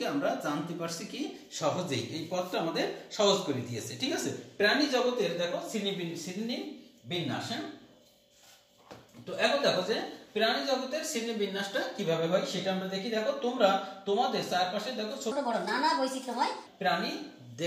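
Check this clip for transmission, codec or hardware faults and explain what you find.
One fault stands out: a section at the wrong speed from 15.32 to 16.66 s. For that stretch the audio runs 1.28 times too fast, so it sounds hurried and lifted by about four semitones before snapping back to normal. The likely cause is a player or editor resampling that segment against the wrong clock. On a spectrogram, harmonics and formant bands jump upward in a block; on the waveform, cycles and envelopes look compressed in time.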